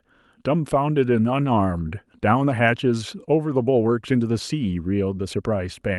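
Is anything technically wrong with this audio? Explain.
No, nothing is wrong: the speech has passed through a normal WebRTC call path, and its top end stops at about 12 kHz, which fits an Opus call codec at its usual bandwidth.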